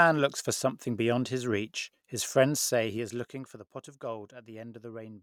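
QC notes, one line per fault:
2.54–3.8 s, zipper noise: the level drops by about 15 dB in unsmoothed 3 dB steps, roughly three per second. Each step clicks audibly.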